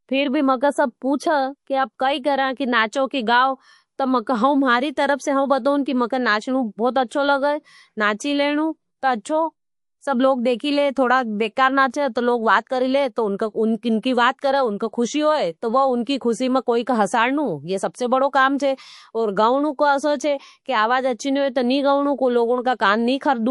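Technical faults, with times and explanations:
Throughout: MP3 compression. Treble is dulled and faint detail swirls in and out. This is likely heavy encoding, which fits a low bitrate near 48 kbps.
7.08–7.11, 11.91–11.94, 16.04–16.07 and 18.58 s: pre-echo. A brief hiss, about 12 to 18 dB up, runs 19 to 28 ms ahead of sharp onsets. This fits long blocks without short-block switching, which spread the coding noise backwards.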